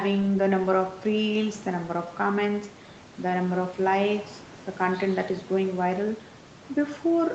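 Nothing stood out on listening to this speech recording.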